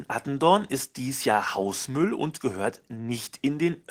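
Opus voice compression runs throughout. The hybrid coder splits the band, and its coarse excitation leaves the speech hoarse and slightly robotic, which fits roughly 16 kbps.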